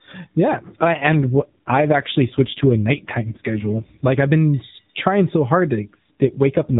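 Speech carried over the AMR narrowband mobile codec, band-limited at 4 kHz, has an AMR rate drop from 0.48 to 4.33 s and again from 5.85 s to the end, just after "trying so hard". The band stays the same and there is no gap, but the voice turns rougher and more synthetic. That fits the network stepping the codec from 12.2 to 5.9 kbps on a weak radio link.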